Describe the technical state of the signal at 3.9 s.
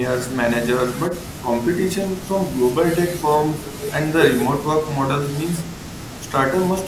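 At 3.9 s the speech signal is intact, with no dropout, distortion, clipping or other fault audible at that moment.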